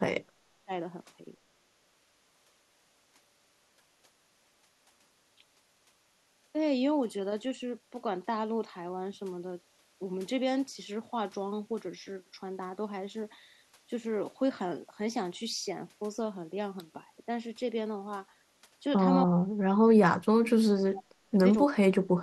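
From 0.00 to 0.72 s, and again at 19.26 to 20.35 s, 20.88 to 21.36 s, 21.67 to 21.75 s and 22.07 s to the end, the speech sinks by about 30 to 40 dB or chops out in fragments. This is speech suppressed in double talk, likely because the echo canceller mistook the talker for loudspeaker echo while both sides spoke at once. Unlike packet-loss dropouts, these are level drops that cluster in stretches of overlapping talk.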